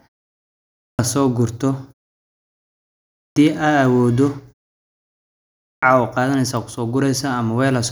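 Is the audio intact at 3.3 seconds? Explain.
No. At 3.3 seconds the speech is inside a clipped start after a pause, from 3.11 to 3.36 s. After about 1.3 s of silence, the output device had gone to sleep. Roughly 250 ms was swallowed while it woke. The speech bursts in abruptly, its opening sounds missing.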